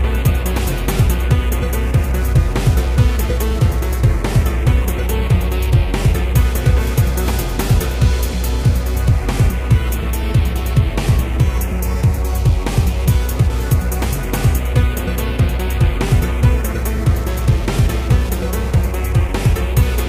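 The audio carries clock drift between sender and receiver throughout. The sender's clock runs roughly four percent fast. The receiver's jitter buffer keeps filling up. Small timing hiccups recur at uneven intervals as the receiver sheds the surplus. Repeated timing corrections run from 0.27 s to 19.73 s. The receiver cuts short pieces to stay in step, always in the same direction. The edits come unevenly spaced. Over that stretch playback runs at 102 percent speed.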